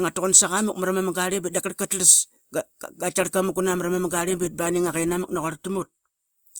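Speech clip where, from 3.19 s to the end, an adaptive stream at a lower bitrate kicks in: codec artefacts rise, which points to roughly a 64-to-24 kbit/s drop.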